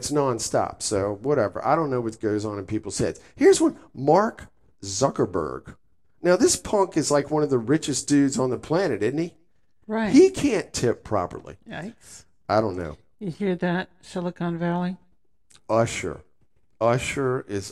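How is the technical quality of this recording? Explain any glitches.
No glitches or technical problems are audible anywhere.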